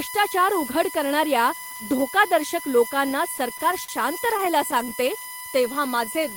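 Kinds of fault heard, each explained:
USB whine: A steady, fixed-pitch tone sits under the speech for the whole clip. Its fundamental is at 1 kHz, but its strongest component is the 2 kHz harmonic, and it runs only about 10 dB below the speech, so it is clearly audible. It comes from the USB bus drawing current in regular 1 ms frames. That periodic load leaks into the audio through the shared power or ground path.
Repeated stalls (stutter): From 3.37 s to 5.08 s, right after "उघड करणाऱ्या धोकादर्शक लोकांना", the speech hesitates and catches about a dozen times. Each stall is short, the longest about 42 ms, and together they add roughly 170 ms while nothing is dropped. Packets kept arriving late, so the jitter buffer repeatedly ran dry. Each time, the receiver stretched the last sound to fill the wait, which accounts for about a tenth of that stretch.
Jitter buffer slow-down: From 5.30 s to 6.35 s the speech plays at about 90% speed while keeping its normal pitch, so syllables sound drawn out and slightly lazy. 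That span gains 112 ms. The jitter buffer was short of reserve and rebuilt it by repeating individual pitch periods and slivers of pauses over and over. This lengthens the audio without shifting pitch.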